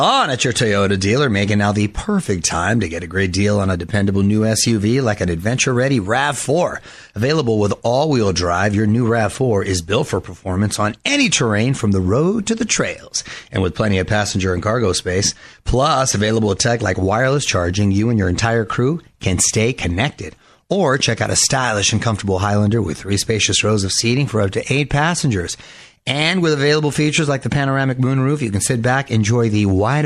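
Throughout, the speech carries plainly audible MP3 compression artefacts, likely from an encoder short of bits, consistent with 64 kbps. Weak bands blink on and off, making s sounds watery and swirly. A spectrogram would show speckled, flickering holes.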